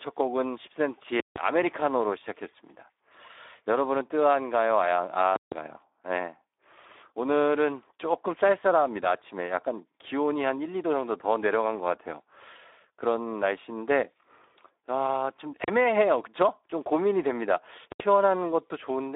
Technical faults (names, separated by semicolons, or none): Speex codec; invalid numbers at full scale